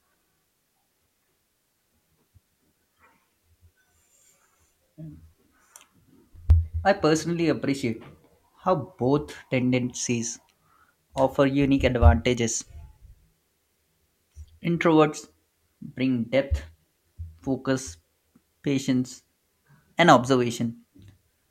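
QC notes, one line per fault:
Nothing stood out on listening to the speech in this recording.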